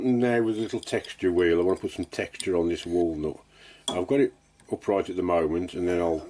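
No technical faults can be heard anywhere in the clip.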